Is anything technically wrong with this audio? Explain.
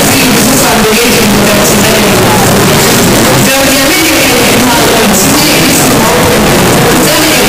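Yes. Signed and unsigned mixed up, throughout the clip: the sound is very loud, harsh distortion, with quiet stretches as loud as the rest. The likely cause is 16-bit signed samples read as unsigned or the reverse, flipping the top bit so every zero crossing jumps across the full range.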